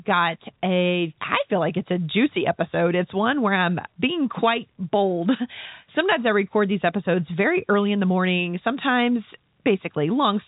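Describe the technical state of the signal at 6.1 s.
At 6.1 s the speech is intact, heard through the narrow band of G.711 telephone coding with no fault present at that moment.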